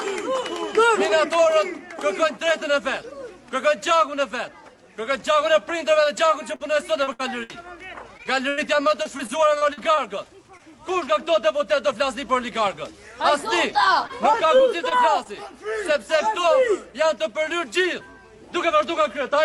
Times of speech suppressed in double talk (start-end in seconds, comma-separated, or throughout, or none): none